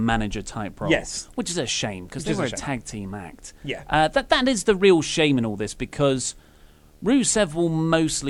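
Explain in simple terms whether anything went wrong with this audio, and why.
A faint, steady buzz with a thin hiss riding on top runs under the speech from start to finish. This is video or display buzz: a screen or video cable leaking into the audio, humming at the picture's 75 Hz refresh rate.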